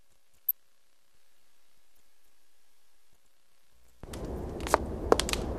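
DAB burbling at 0.48 to 0.51 s: bit errors from weak reception get past error correction into the MP2 data, producing short noise blips in individual sub-bands.

From 1.15 to 3.13 s, a doubled audio track: a dry full-band copy trails about 300 ms behind at about 5 dB lower, starting and stopping abruptly. It likely comes from a slower second capture path or an edit holding two offset copies.

DAB burbling returns at 3.27 to 3.41 s, with the same sub-band blips from uncorrected bit errors.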